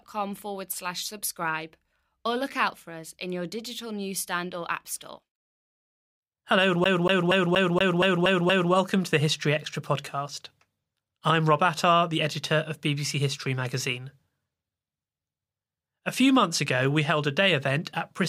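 From 6.84 to 8.73 s, a CD stuck on one turn: the laser jumps back every rotation, so 0.24 s of speech stutters eight times before "welcome to the".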